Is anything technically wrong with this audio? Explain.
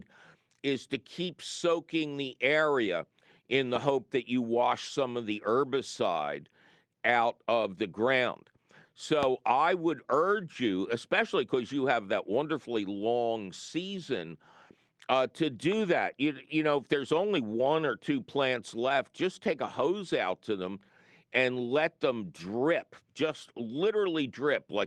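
Yes, there's one loud pop at 9.23 to 9.25 s, jumping roughly 15 dB over the speech, likely a voltage spike from a plug, switch or static. The talking carries on underneath.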